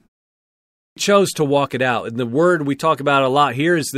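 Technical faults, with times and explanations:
0.78–0.97 s, clipped start after a pause: after the opening 0.78 s of silence, the output device seems to doze off and takes about 186 ms to wake, so the start of "chose to walk it" is swallowed and the word bursts in abruptly, missing its first sounds.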